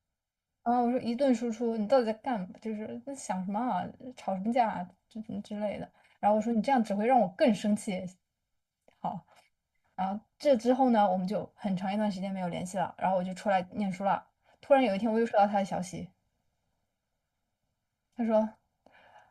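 Channel delay (comb filtering) runs throughout this speech: one channel lags by roughly 1.5 ms, so the mono sum cancels at evenly spaced notches from around 400 Hz, sounding hollow and phasey.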